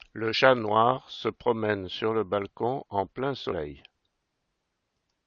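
Damaged data in a compressed stream hits this speech clip at 0.31 to 0.35 s, just before "noir se promène sur", and at 3.51 s, after "le balcon en plein". Corrupted frames throw the decoder out of sync at each point.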